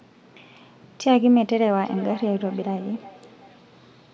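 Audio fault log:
1.81–3.65 s, feedback echo between two devices: speech comes round again roughly every 0.4 s, thin and ringing, at most about 20 dB below the direct sound. A second device replays it into a microphone whose canceller ignores it. The spectrogram shows fainter repeated copies, and the waveform shows trailing smaller bursts.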